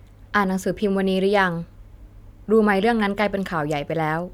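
Nothing stood out on a careful listen to this speech recording.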